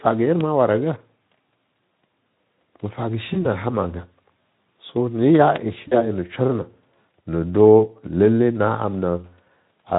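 At 3.33 to 3.47 s and again at 5.88 to 6.04 s there's VoIP packet loss concealed by the speech codec. Over the Speex stream, the decoder stretches the speech across lost 20 ms and 40 ms gaps into a fading buzz or coloured noise.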